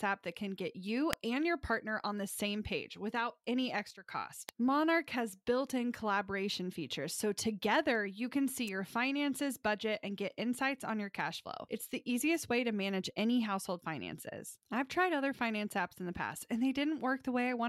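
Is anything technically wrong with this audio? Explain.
Yes. There are electrical switching spikes at 1.13 s, between "that can get you" and "and your partner on", at 4.49 s, and at 8.68 s, after "together you can see". Each is a sharp snap, likely from a nearby switch arcing into the line. A sudden gain jump follows "same page without any", from 3.91 to 4.06 s. Sound and background noise both drop about 12 dB at once, likely from an unramped gain change.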